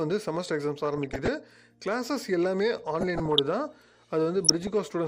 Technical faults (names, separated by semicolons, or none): DAB burbling